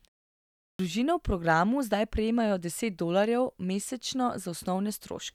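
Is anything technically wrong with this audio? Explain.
Yes, there is one fault: a clipped start after a pause. From 0.68 to 0.79 s, right where the speech begins after 0.68 s of silence, about 112 ms of sound is swallowed before "v programu" comes through, so the speech starts abruptly without its opening sounds. The output path had gone idle during the silence and needed that time to wake before passing audio. Unlike muted pauses, where only background vanishes, here actual speech is lost.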